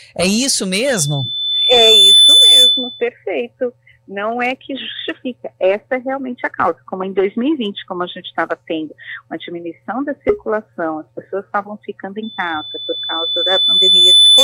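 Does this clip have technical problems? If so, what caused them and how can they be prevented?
Yes. Loudspeaker feedback squeal from 0.85 to 3.08 s and from 12.23 to 14.44 s: the microphone re-amplifies its own loudspeaker, so a 3.5 kHz tone swells, over about one and then two seconds, to roughly 10 dB above the sound. Prevent it by lowering gain, moving the microphone away from or behind the loudspeaker, or notching out 3.5 kHz.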